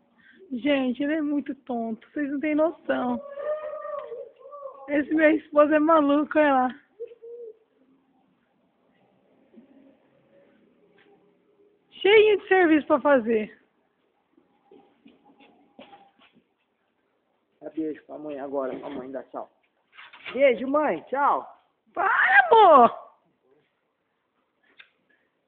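No technical faults can be heard anywhere in this audio. There is no moment in it that calls for a timestamp or a closer listen.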